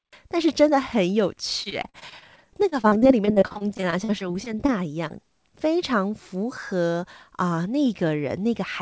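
Speech carried over a call path whose content stops at 8 kHz, which fits a wideband codec such as G.722. From 1.64 to 4.70 s there is repeated packet loss, producing robotic sound. Around thirty holes, none longer than about 43 ms, were each patched by extending the preceding audio, so roughly a fifth of that stretch is synthetic. On a spectrogram this appears as repeated smeared, frozen harmonic bands and abrupt edges. At 5.08 to 5.11 s, a short concealed packet loss leaves a brief smear where 13 ms of a 20 ms hole was filled and blended back.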